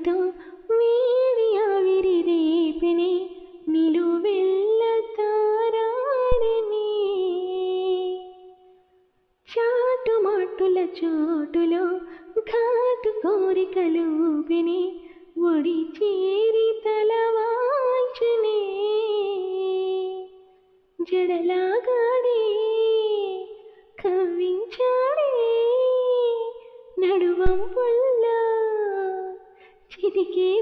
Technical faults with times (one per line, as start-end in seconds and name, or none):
6.32-6.58 phantom power thump
27.46-27.82 phantom power thump